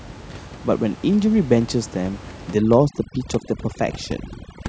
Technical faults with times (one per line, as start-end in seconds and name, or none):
2.54-4.69 overdone noise removal